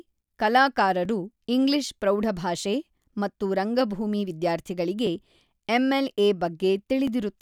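Speech with overlapping chunks: at 1.05, 3.06, 5.07 and 7.07 s, each chunk restarts about 7 ms before the previous one ended, so that sliver plays twice, giving a brief stutter-click every 2 s. Unlike a dropout, nothing is lost; audio is repeated rather than skipped.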